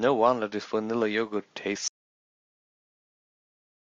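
At 1.88 s the speech stops abruptly, mid-flow, and an audio dropout to silence runs from there to the end of the clip. The gap is silent: not quiet room tone, but nothing at all. The input was likely lost, through a disconnected device, failed link or accidental mute, while recording continued. A natural pause or a noise gate would leave some background hiss or decay; here the cut is instant and the silence is total.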